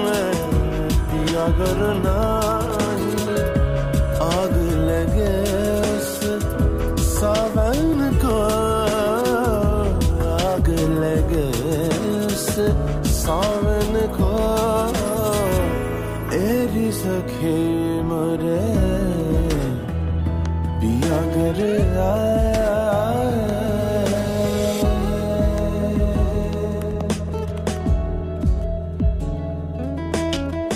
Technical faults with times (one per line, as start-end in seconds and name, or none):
none